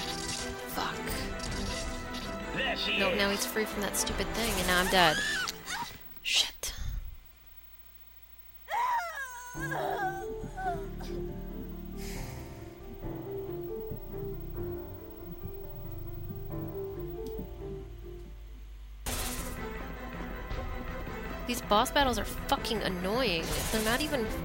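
From 16.92 s to the end at 24.44 s, mains hum appears: a steady 50 Hz tone with low harmonics, around 10 dB below the signal, from power-line coupling.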